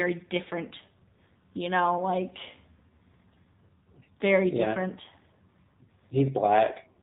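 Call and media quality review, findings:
AMR narrowband mobile codec, whole clip: speech band-limited with nothing above 4 kHz, buzzy synthetic voicing from pulse-driven vocal-tract model, fits low AMR-NB mode near 7.4 kbps. Distinct from plain low-pass filtering: the artificial, metallic texture, not just dullness.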